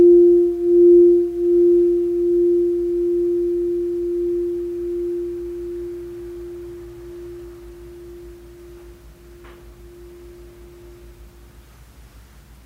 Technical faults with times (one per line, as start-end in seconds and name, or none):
none